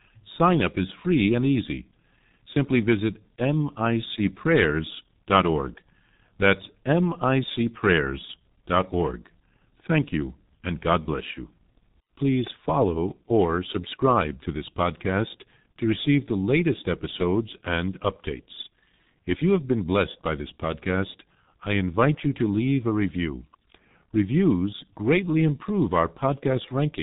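From start to finish the speech carries heavy G.723.1 codec damage. This old internet-telephony coder squeezes the signal to about 6.3 kbit/s and works in 30 ms frames, updating its model of the vocal tract only once per frame. Nothing above 3.8 kHz survives, so the voice sounds muffled and dull, while the coarse frame-by-frame modelling leaves a hoarse texture and smears consonants so that sibilants and plosives lose their edges.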